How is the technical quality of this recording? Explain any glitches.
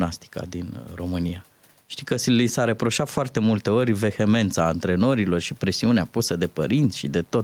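The recording has audible gain pumping from start to finish. In the gaps, the room noise sits about 44 dB below the speech, and the gain swings by about 5 dB. The likely cause is input gain set well too high with a fast limiter or compressor clamping every loud syllable, so the level breathes and the speech sounds squashed.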